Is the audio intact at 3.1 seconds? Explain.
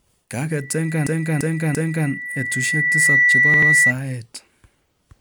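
No. At 3.1 seconds the clip is inside a loudspeaker feedback squeal that runs from 0.50 to 3.93 s. The microphone is picking up the loudspeaker it drives, and at 2 kHz the loop gain has gone above one, so that frequency feeds on itself. It swells over about a second and a half into a steady, piercing 2 kHz whistle that sits around 10 dB above the speech and dominates it at this moment.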